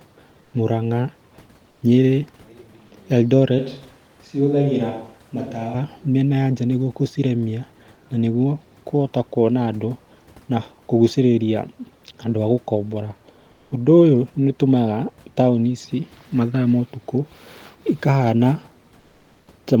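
At 0.43 to 0.53 s and again at 1.71 to 1.81 s, the quiet background is replaced by comfort noise. For 100 ms each time, the real room sound, about 40 dB below the loud speech, turns steady and featureless. It drops only about 1 to 2 dB. This likely comes from discontinuous transmission, such as Opus DTX.

From 3.59 to 5.74 s there is a switch to a distant microphone, likely because the close one dropped out. The voice turns hollow and roomy, with thinner bass. It sits a few decibels lower, and more room noise comes through. Both changes are abrupt.

The comfort noise in place of the background returns at 13.51 to 13.71 s, for 200 ms, and at 18.99 to 19.47 s, for 480 ms. Each time, the detailed room noise gives way to flat synthetic hiss about 1 to 2 dB quieter.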